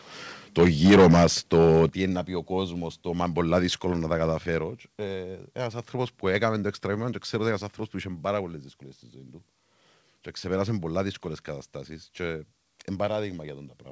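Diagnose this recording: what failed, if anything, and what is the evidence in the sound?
Microphone overload, at the analogue-to-digital converter. From 0.58 to 1.27 s the speech peaks sound flattened and crackly. The input runs about 12 dB past full scale, with a large share of samples clipped. A milder burst at 1.53 to 1.86 s runs about 4 dB over. The likely cause is input gain set too high for the converter.

Microphone volume stepped down, in call processing. At 0.88 s the level drops abruptly by about 3 dB, in the middle of the first distorted stretch. At 1.89 s, just after the second one, it falls again by about 7 dB. Speech and background both drop together. This points to the call software likely lowering the device input volume in steps, heard through a G.722 path with nothing above 8 kHz.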